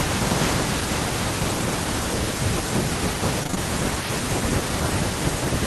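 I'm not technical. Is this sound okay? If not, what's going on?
No. Between 3.43 and 3.58 s, repeated packet loss dropped four small chunks of the audio, each patched by stretching the sound before it, so that moment turns choppy and robotic.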